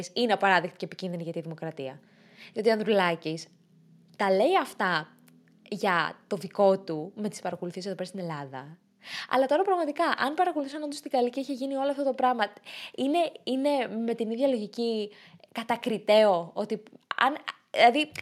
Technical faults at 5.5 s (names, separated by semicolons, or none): none